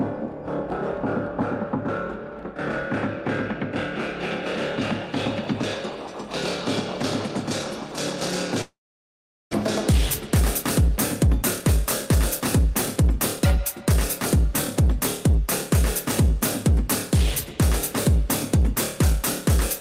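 From 8.61 s to 9.55 s the sound breaks off: a brief fading buzz, then about 770 ms of silence before it resumes, with roughly 600 ms of material gone. This points to a long network dropout, likely. Unlike a short packet loss, the concealment gives up and leaves silence.

From 9.92 s to 14.37 s a jitter buffer speed-up follows, as the receiver works off the roughly 300 ms of built-up delay by trimming short pitch-period pieces. The sound runs about 106% fast at unchanged pitch, so it feels hurried rather than higher, as resampling would make it.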